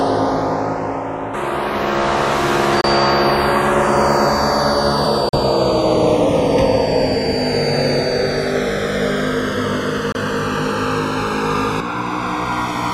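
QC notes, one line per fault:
Throughout: channels drifting apart. The left and right channels behave as if clocked by separate devices with a clock mismatch of roughly 100 ppm, so the inter-channel delay creeps steadily and reaches around a millisecond by the end. Summed to mono, that growing offset produces a comb filter whose notches glide slowly down through the spectrum, heard as a gradual flanging or hollow, phasey sweep rather than a fixed coloration.
2.81 s, 5.29 s and 10.12 s: Bluetooth dropout. Three short holes where the output falls silent, lasting 27 ms, 40 ms and 27 ms. When sound returns it has moved ahead, as if playback continued during the gap, so material is skipped rather than delayed. The likely cause is wireless packets arriving too late and being discarded. The gap lengths fit losing two, three and two packets of about 13 ms each.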